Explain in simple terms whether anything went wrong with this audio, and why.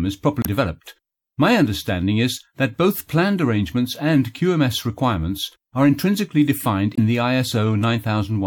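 Two short glitches break through the sound, from 0.41 to 0.47 s and from 6.93 to 6.99 s. These come from damaged data in a compressed stream. The decoder misreads garbled bytes and loses its place while searching for the next frame, unlike a dropout, which simply goes silent.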